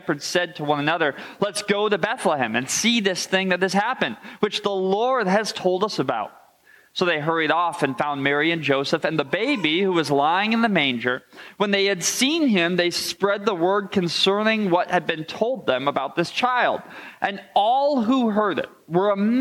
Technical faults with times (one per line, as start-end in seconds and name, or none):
none